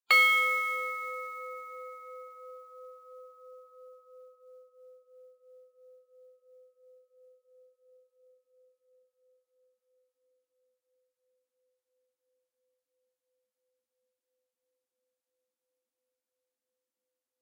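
A recording of sounds with sample clock jitter from start to finish. A fine hiss and grittiness rides on the sound itself. It swells on loud, bright moments and disappears when the clip goes quiet. The converter's timing wanders by roughly 7 microseconds. Each sample is therefore taken a little early or late. Steep, fast-changing parts of the waveform suffer most. The resulting error sits only about 20 dB below the signal.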